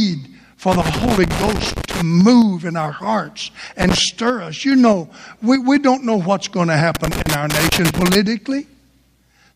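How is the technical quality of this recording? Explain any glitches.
The recording has three bursts of loose connector crackle. The first runs from 0.72 to 2.02 s, just before "move in our hearts". The second, from 3.82 to 3.98 s, follows that phrase. The third runs from 6.95 to 8.15 s, after "know what's going to". A worn or dirty contact is making and breaking as it shifts. This chops the signal on and off. The result is irregular scratching over the speech.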